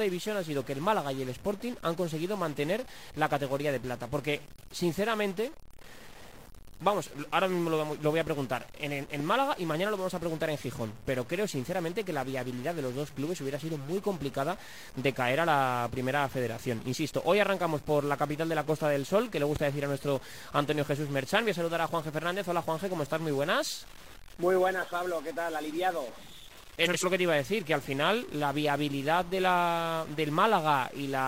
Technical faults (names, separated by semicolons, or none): stuck bit; loud pop; frames out of order